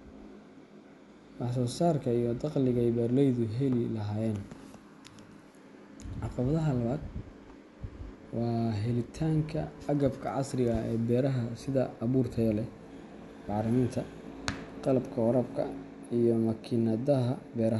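No technical faults are audible anywhere in the speech recording.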